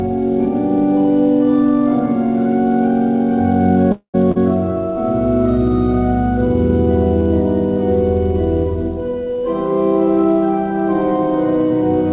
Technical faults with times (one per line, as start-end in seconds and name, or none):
3.92-4.16 call audio freeze
4.32-4.37 short concealed packet loss